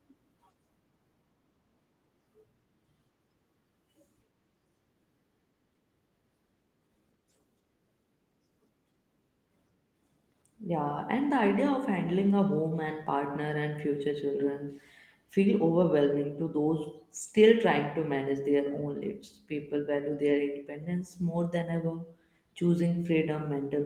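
Nothing goes wrong anywhere in this speech, and the Opus voice compression it passes through leaves only a light touch on the sound.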